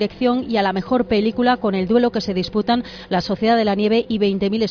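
No technical faults can be heard anywhere in the audio.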